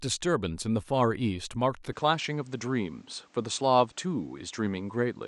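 At 1.92 s the speech turns duller, losing everything above 8.8 kHz with no gap, plus a faint new noise floor, likely an input switched to a poorer device.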